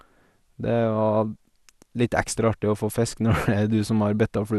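From start to end the speech carries plainly audible MP2 compression damage, likely from a rate around 80 kbps. Nothing sounds above 12.1 kHz, and the remaining upper sub-bands switch on and off with a gurgling, granular roughness, unlike the steady dullness of simple low-pass filtering.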